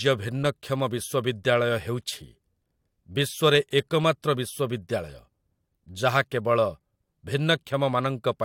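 No technical faults can be heard anywhere in this speech recording. There is nothing to mark at any point in the timeline.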